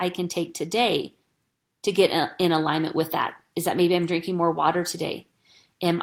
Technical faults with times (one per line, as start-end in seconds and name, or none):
none